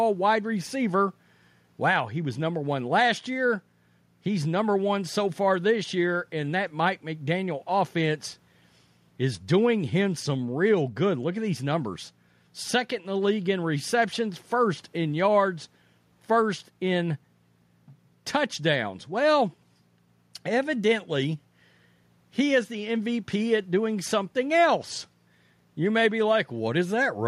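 Nothing here jumps out as a technical problem; the speech just carries on steadily with no faults to point to.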